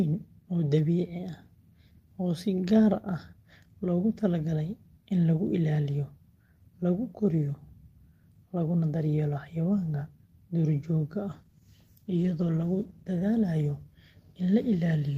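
After "xayawaanka duurjoogta", from 11.31 to 13.71 s, a call bitrate drop turns the sound coarse and muffled. Unlike packet loss, there are no gaps.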